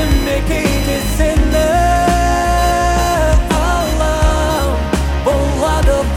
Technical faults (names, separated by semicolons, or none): computer activity noise